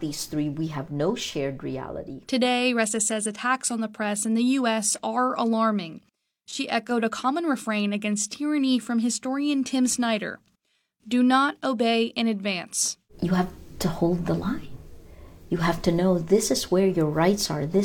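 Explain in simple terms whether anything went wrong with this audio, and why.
Nothing stood out as wrong when listening to this recording.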